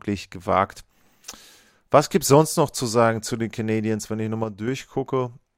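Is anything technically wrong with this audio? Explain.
Yes. From 4.44 to 4.68 s, just after "wenn ich", the speech drops abruptly by about 6 dB for roughly a quarter second, then returns. This is likely one channel dropping out: with one stereo side missing, the mono sum loses half of the shared signal.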